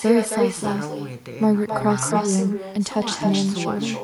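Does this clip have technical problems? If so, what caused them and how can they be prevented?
Yes. Echo with no canceller runs through the whole clip. The speech returns about a third of a second later, about 7 dB quieter and thinner. The far end's loudspeaker fed its microphone, and nothing removed it. Enable acoustic echo cancellation at the far end, or have that listener use headphones.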